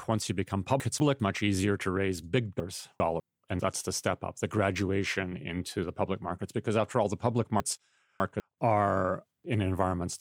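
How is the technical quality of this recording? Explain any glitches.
The recording has three reordering glitches. Chunks out of order occur at 0.8 to 1.2 s, 2.6 to 3.2 s and 7.6 to 8.4 s: a 200 ms chunk of speech plays one, two, then three chunks late, so the speech briefly jumbles around hard joins.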